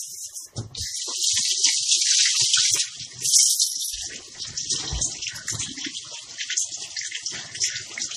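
MP3 compression damage runs through the whole clip, from start to finish, and is plainly audible. Nothing comes through above 14.9 kHz, a hard treble ceiling where the encoder stopped spending bits. The coding artefacts point to a starved bitrate, which fits roughly 40 kbps, and that is likely the cause: too few bits forced the encoder to discard weak frequency detail and let it flicker between frames, leaving the sound thinned and unsteady.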